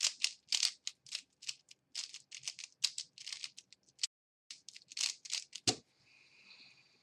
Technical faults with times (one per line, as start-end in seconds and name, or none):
4.05-4.51 playback stall